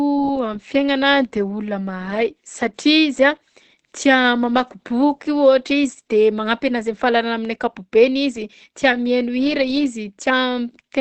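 Throughout the speech, the sound is muffled and hoarse, with plainly audible damage and nothing above 8.3 kHz. The cause is likely Opus compression running in its SILK speech mode at wideband bandwidth, which fits a rate near 16 kbps.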